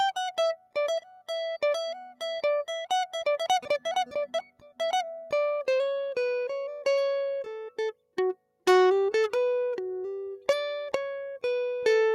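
Sound cut by the noise suppressor in the music at 0.56–0.76 s, 1.01–1.29 s and 4.5–4.8 s: it mistook the music for noise, dipping it by about 12, 10 and 12 dB.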